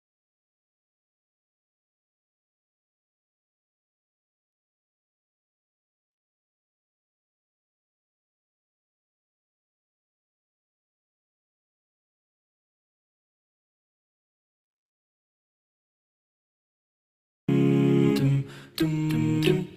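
A jitter buffer speed-up runs from 18.14 s to the end at 19.76 s. The audio plays about 111% fast at unchanged pitch and sounds hurried. The receiver's buffer had grown too deep, so it cut short pitch-period slices, removing roughly 200 ms.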